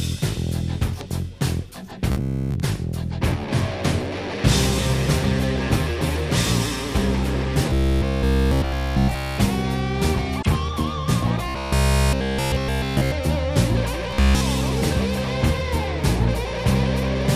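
From 2.12 to 2.57 s, 7.71 to 9.38 s, 11.49 to 13.12 s and 14.11 to 14.42 s there's robotic sound from repeated short buffers: a rigid metallic buzz at 66.7 Hz, likely from one 15 ms chunk being replayed when fresh audio arrived too late. It's wall-to-wall in the first three and covers most of the last. Between those, at 10.39 to 10.47 s, damaged data in the compressed stream gives a quick glitch as the decoder loses its footing and resyncs on the next good frame.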